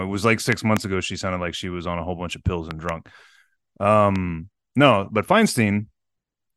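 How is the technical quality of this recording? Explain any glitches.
The speech is marred by three loud pops. The first comes at 0.52 to 0.79 s, after "it was like" and before "ago she sounded like". It is a double pop, about 15 dB above the speech. A second double pop, about 10 dB up, follows "whole bunch of pills" at 2.71 to 2.91 s. A single pop of similar level sits at 4.16 to 4.18 s, just before "no but". Each is likely a sudden voltage spike, shaped into a sharp thump. The speech continues underneath.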